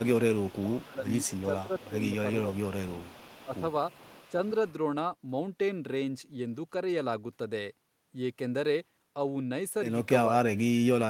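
At 0.0 s, and again from 0.49 to 2.19 s and 2.52 to 4.73 s, there is echo leak, likely from an echo canceller that let loudspeaker pickup through. It sounds like a faint copy of the speech trailing 437 ms behind, about 25 dB down. Overlapping this, from 0.19 to 3.52 s, speech is suppressed in double talk, likely because the canceller ducked the near talker too. The voice dips by roughly 15 dB, for about two seconds in total. From 10.28 s to the end, the voice drops far deeper, close to silence.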